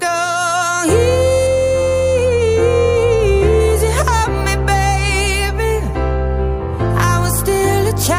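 From 1.47 s to 3.60 s, de-emphasis is applied wrongly: a treble-cutting filter meant to reverse pre-emphasis acts on audio that never had that boost. The response tilts smoothly downward, about 8 dB lower at 10 kHz than at 1 kHz, so the sound turns dull and muffled.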